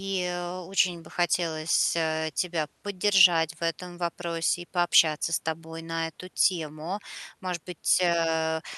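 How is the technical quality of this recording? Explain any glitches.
Nothing stood out on listening to this speech recording; no glitches came to attention.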